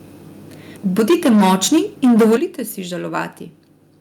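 Around 0.98 s the speech starts hitting a hard ceiling, and it stays there until 2.37 s. That's microphone overload, likely from the input volume being set too high, so peaks overshoot by about 11 dB and roughly a fifth of the samples get their tops flattened. The result is a harsh, crackly edge on the loudest syllables. At 1.0 s there's a sudden drop of about 3 dB, and at 2.37 s a bigger one of about 11 dB, where the clipping stops. Both are microphone volume stepped down, likely the call software cutting the input volume after spotting the overload, and voice and background fall together each time.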